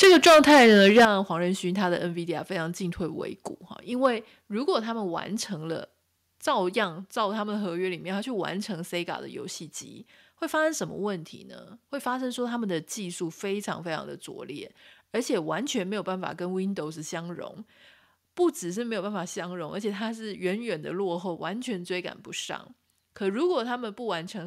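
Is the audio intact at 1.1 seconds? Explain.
No. Microphone overload runs from 0.02 to 1.05 s: the speech is pushed about 12 dB past the converter's ceiling, with roughly a fifth of the samples flattened at the converter's limit. The likely cause is an input volume set too high on the microphone. The flattened peaks add a harsh, crackling edge to every loud syllable until the overload ends just before 1.1 s.

Microphone volume stepped down at 1.05 s: the voice and the background both fall by about 10 dB in a single abrupt step immediately after the distorted stretch. This is likely the call software detecting the clipping and cutting the device's input gain. By 1.1 s the audio sits at this suddenly lower level.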